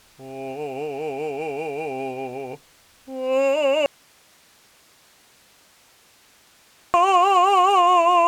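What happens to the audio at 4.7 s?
At 4.7 s the music is inside an audio dropout to a faint residue, lasting from 3.86 s to 6.94 s. The music cuts out abruptly, leaving only hiss about 35 dB down, likely because the source was lost while the path stayed live. Unlike a fade or true silence, the gap is never empty.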